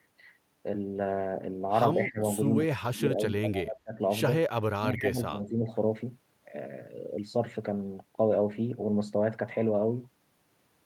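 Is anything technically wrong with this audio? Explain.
Yes. At 2.03–2.2 s, 2.68–4.0 s and 4.79–5.67 s the speech abruptly drops, by up to about 25 dB. This is likely speech suppressed in double talk: an echo canceller confused the talker with loudspeaker echo and turned both down. The waveform shows sudden troughs, and the spectrogram shows patchy, thinned bands.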